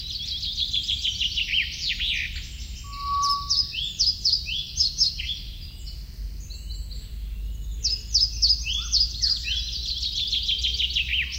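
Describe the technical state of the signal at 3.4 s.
At 3.4 s the signal is caught in a loudspeaker feedback squeal, running from 2.84 s to 3.73 s. A microphone is hearing the loudspeaker it drives. At 1.1 kHz the loop gain passes one, so that frequency keeps feeding itself. It swells over about a third of a second into a steady squeal. It then sits roughly 5 dB above the sound around it until it ends at 3.73 s.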